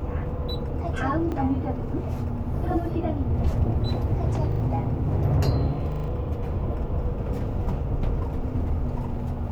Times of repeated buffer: 1.32-1.36, 4.52-4.60, 5.92-6.08

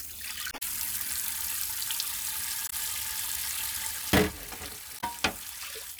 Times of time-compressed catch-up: none

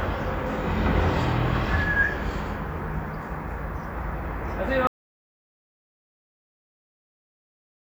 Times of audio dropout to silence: 4.87-7.84

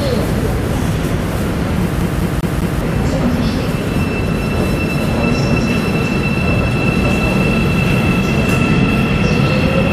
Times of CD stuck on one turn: 2.01-2.81

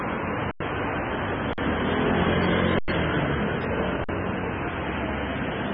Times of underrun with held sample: 0.51-0.60, 1.53-1.58, 2.79-2.88, 4.04-4.09

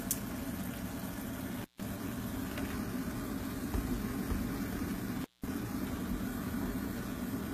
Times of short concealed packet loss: none

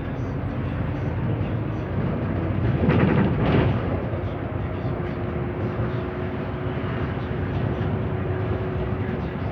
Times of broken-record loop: none

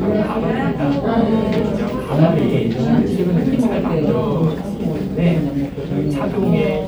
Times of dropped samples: 1.58, 2.39, 3.59, 4.44

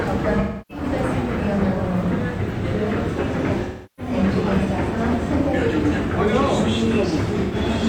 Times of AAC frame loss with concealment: 0.39-0.84, 3.63-4.13, 7.43-7.55

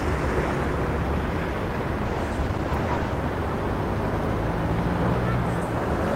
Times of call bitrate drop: 2.07-3.25

